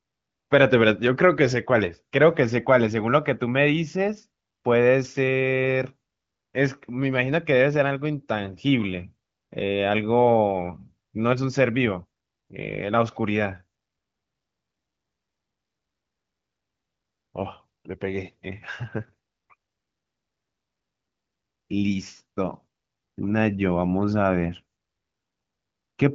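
No technical faults can be heard in this speech recording. It has the bandwidth of AMR wideband (HD Voice) coding, with nothing above about 7.4 kHz, and the clarity fits a rate near 18.25 kbit/s.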